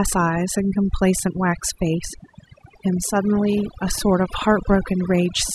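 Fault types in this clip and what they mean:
overdone noise removal: a denoiser pushed too hard clamps individual frequency bands near its noise estimate, dragging soft speech detail down too. Throughout, the background collapses into near silence with twinkling specks; a spectrogram shows scattered isolated dots between sparse, hollowed-out speech.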